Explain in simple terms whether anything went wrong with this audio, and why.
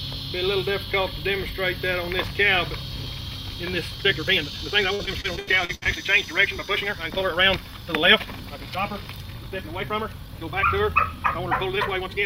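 Two things go wrong in this audio. From 3.86 s to the end, the pace suddenly jumps. The sound plays about 1.77 times faster, but its pitch does not rise. This is a time-stretched section, most likely made by software squeezing the audio to fit a shorter length. To keep the pitch steady, it drops short pieces of the sound. That is why this part sounds rushed.

Inside that faster part, from 4.95 s to 5.88 s, there is repeated packet loss, which gives a robotic sound. Small chunks of the audio went missing eight times in under a second. The longest hole lasts 78 ms. Each hole is patched by stretching out the sound just before it. About a third of this stretch is patched this way, so it sounds broken up.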